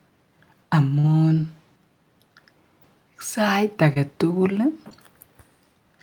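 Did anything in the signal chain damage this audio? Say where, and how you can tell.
Yes, the damage is at the network stage: short concealed packet loss, three times in this speech clip, around 0.99 to 1.05 s, 3.93 to 3.98 s and 4.90 to 4.93 s. Each one is a brief smear. About 40 ms went missing at the first spot and 20 ms at each of the others. The receiver papered over the holes by extending the preceding sound for about 41, 22 and 12 ms before crossfading back into the real signal.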